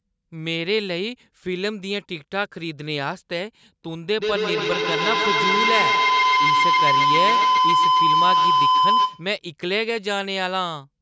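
From 4.18 to 9.37 s a feedback howl builds: the mic-to-speaker loop gains level each pass, narrowing to a tone near 1 kHz, with repeats roughly every 150 ms, peaking about 6 dB above the speech.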